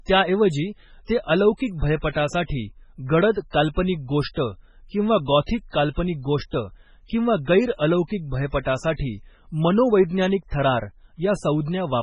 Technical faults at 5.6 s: MP3 compression

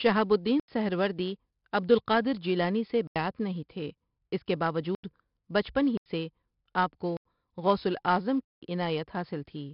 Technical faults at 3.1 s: 4-bit ADPCM compression; block of digital silence

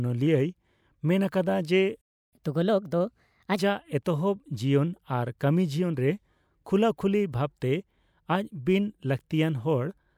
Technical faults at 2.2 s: playback stall

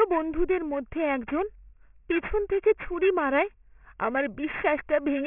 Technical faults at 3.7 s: aliasing

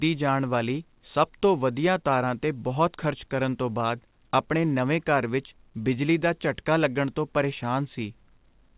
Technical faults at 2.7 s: none

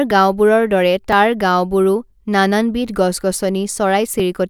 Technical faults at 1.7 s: periodic USB or driver dropouts

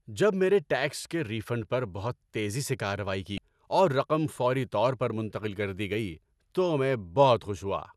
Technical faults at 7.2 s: none

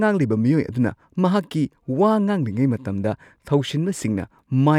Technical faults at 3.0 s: none

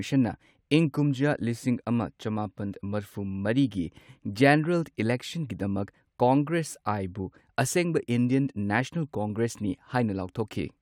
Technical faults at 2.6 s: none

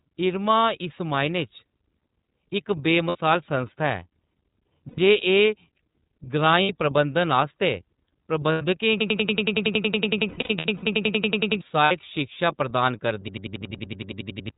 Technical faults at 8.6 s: iLBC codec; lost iLBC frames

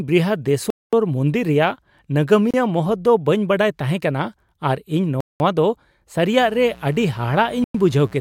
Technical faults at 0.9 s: Bluetooth stall

